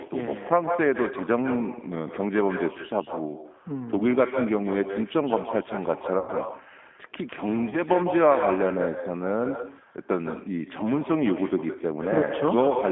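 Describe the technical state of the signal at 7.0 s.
At 7.0 s, as through the whole clip, there's echo with no canceller: the far end's loudspeaker feeds its mic, so the speech returns about 9 dB down, roughly 150 ms late, and thin. The G.729 codec damage is also plainly there. The speech sits in a 200 Hz to 3.5 kHz band, and the pulse-based rebuild leaves it rough and synthetic, which fits an 8 kbit/s stream.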